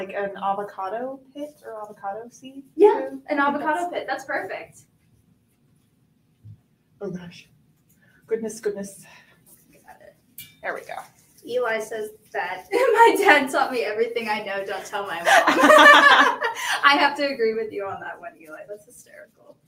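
No dropouts, clicks, distortion or level jumps turn up anywhere in the audio, so there are no technical faults to log.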